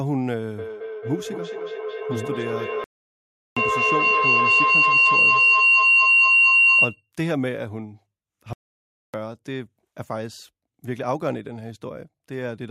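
Speech carries a rising tone from 0.58 s to 7.1 s that builds into a feedback howl around 3 kHz, repeating roughly every fifth of a second and at its loudest about 9 dB above the speech. Two devices sharing a call in one room form a loop that gains level on every pass, so the repeats grow and narrow towards the pitch the loop favours. The sound also drops out completely from 2.84 s to 3.57 s (about 0.72 s) and from 8.53 s to 9.14 s (about 0.61 s) before continuing. These gaps are likely playback stalls, where the player either ran out of data or had its thread blocked and went silent until it recovered.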